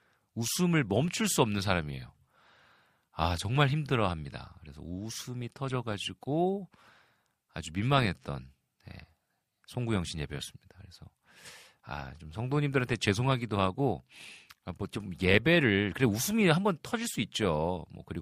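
No technical faults can be heard anywhere in the speech. There is nothing here that calls for a timestamp or a technical explanation.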